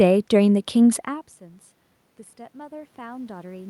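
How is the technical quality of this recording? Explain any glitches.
There is one glitch: automatic gain rising near the end. From 2.51 s to the end of the recording, the input level falls by about 24 dB, and the automatic gain control responds by steadily raising its gain. The voice and the room noise swell together over that final stretch rather than jumping at once. The level change around 1 s comes from the talker moving relative to the microphone, and the background noise is part of the room itself.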